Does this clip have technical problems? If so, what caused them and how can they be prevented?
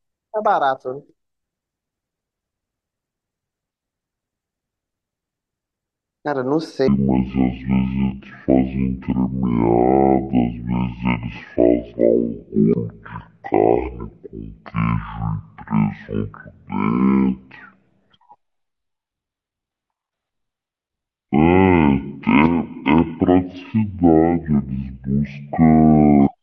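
Yes. From 6.88 s to the end, the speech plays at the wrong speed, about 0.51 times the original rate. Because speed and pitch move together, everything after that point is roughly half as fast and about ten semitones lower, giving a deep, dragging sound. This is likely a clock mismatch, with that section read back at about half the rate it was written at. To prevent it, confirm matching sample rates at every edit and playback stage.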